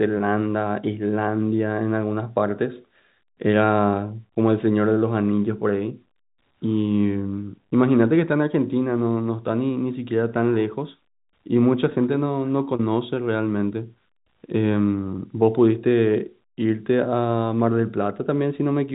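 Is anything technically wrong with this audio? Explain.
No, nothing is technically wrong with this audio.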